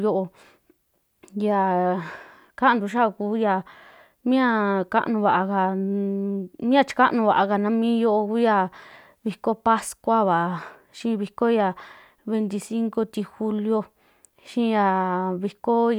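Nothing technically wrong turns up in this speech recording; there's no audible fault anywhere in it to point to.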